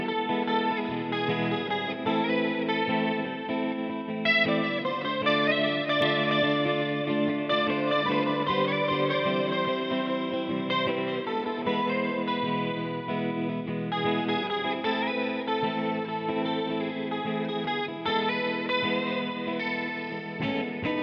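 From 6.02 s to 10.88 s a doubled audio track appears: a second, full-band copy of the sound trails the original by roughly 0.4 s at about the same loudness, then cuts in and out abruptly at those edges. The likely cause is the signal being captured twice, once through a slower path. Unlike an echo or reverb, the copy never decays, repeats only once, and carries no added room colour.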